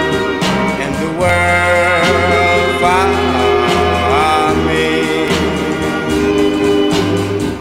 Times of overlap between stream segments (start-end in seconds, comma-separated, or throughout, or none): 1.29, 5.28